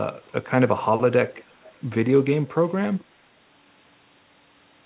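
A faint, delayed copy of the speech surfaces from 1.36 to 1.69 s, again at 2.48 to 2.55 s and at 2.99 to 3.05 s. It trails the speech by about 380 ms and sits roughly 30 dB down. This is an echo leak, likely from a far-end loudspeaker whose echo canceller let residue through, heard over narrowband call audio with nothing above 4 kHz.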